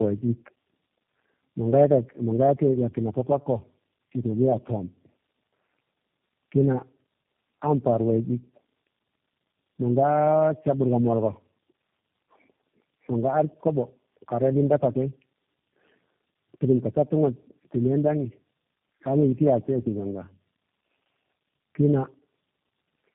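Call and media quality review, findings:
Tandem speech coding, throughout the clip. The speech is rough, muffled and warbly, worse than a single narrowband codec would leave it. The sound points to three low-rate speech codecs in a row, likely AMR-NB at 7.4 kbit/s twice and then G.729A, bridged by G.711 legs. Each stage re-encodes the previous stage's artefacts. On a spectrogram there is a hard ceiling at 3.8 kHz, with smeared, blotchy formants and ragged harmonics. The waveform shows a dulled, unsteady envelope.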